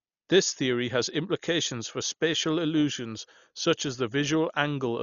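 Throughout the speech, a spectrogram shows a hard ceiling at 7 kHz and speckled, fluttering noise around tones, likely heavy Dolby Digital compression at a starved bitrate near 40 kbps.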